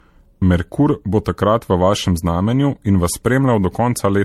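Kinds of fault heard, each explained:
Generation loss: throughout, the speech sounds swirly, hollow and smeared with nothing above 16.4 kHz, likely from about five MP3 re-encodes, fitting 64 kbit/s.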